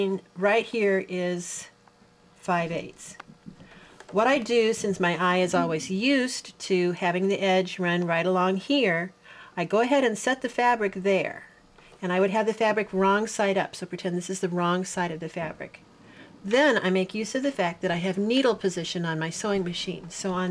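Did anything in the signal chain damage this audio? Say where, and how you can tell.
No, nothing stood out on listening that would point to damage at any stage of the signal chain.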